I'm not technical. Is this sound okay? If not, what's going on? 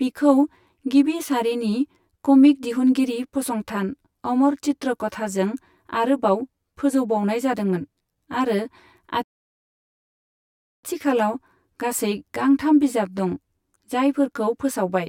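No. Two things are wrong with this speech recording.

The first runs through the whole clip: a channel delay (comb filtering). One side of the stereo signal arrives roughly 10 milliseconds after the other, and when the two are combined into one, parts of the sound cancel each other at regular steps up the frequency range, starting around 50 Hz. The result is a hollow, slightly phasey quality, as if the speech were heard through a tube.

The second is a rebuffering stall from 9.23 to 10.84 seconds. Playback ran out of downloaded audio, so the sound stops dead and goes silent for about 1.6 seconds, then carries on exactly where it left off. No speech is lost, but that pause is added to the recording, making the clip longer than the original.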